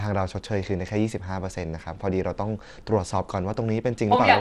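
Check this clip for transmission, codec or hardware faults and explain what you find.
One codec fault runs through the whole recording.

From start to finish, the speech carries the marks of Bluetooth SBC compression, the likely cause. SBC splits the signal into a few broad sub-bands and gives each a share of a tight bit budget. The quiet upper bands get little or nothing. The damage fits a low bit rate near 96 kbps. Nothing survives above 17 kHz. The treble sounds thin and flickery. A gritty, grainy edge clings to the voice.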